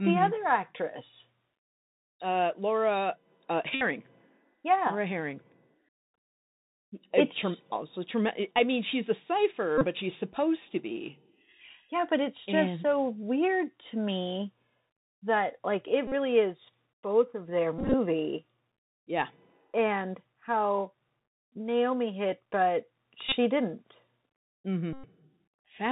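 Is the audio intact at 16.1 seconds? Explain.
No. From 16.07 to 16.13 s a steady buzz near 267 Hz replaces the speech. This is a Bluetooth headset packet repeated fault: about 45 ms of voice packets were lost, and the last good packet was decoded again every 3.75 ms until clean packets returned.

Underneath, the Bluetooth CVSD headset codec is plainly audible here too. Nothing above 4 kHz survives, and because this 64 kbps one-bit up-or-down coding cannot follow fast, loud high sounds, s sounds turn scratchy, while a granular hiss sits under the speech.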